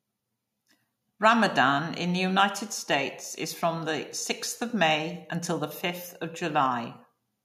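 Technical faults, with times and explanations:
No technical faults are audible anywhere in this speech.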